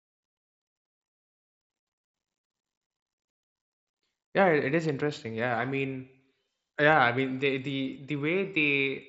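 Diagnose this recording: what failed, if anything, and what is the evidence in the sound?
Nothing failed in this speech recording. It arrives over a Bluetooth headset link using the mSBC codec, so the sound stops at about 7.7 kHz and carries only the light graininess that codec leaves on louder passages.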